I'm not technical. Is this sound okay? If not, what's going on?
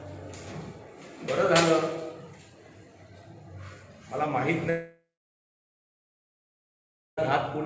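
No. From 4.70 to 7.20 seconds there is a long network dropout. The last sound smears into a fading buzz, then about two seconds of silence follow. The sound returns at 7.20 seconds with that stretch missing, likely because the connection stopped delivering audio for a long stretch.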